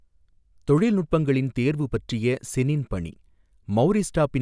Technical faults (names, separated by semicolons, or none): none